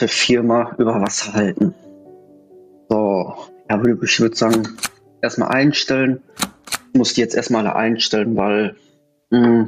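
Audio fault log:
throughout, gain pumping: The input gain is likely set far too high, so a fast limiter or compressor clamps down on every loud sound and releases in the gaps, swinging the level by around 15 dB, leaving the audio squashed.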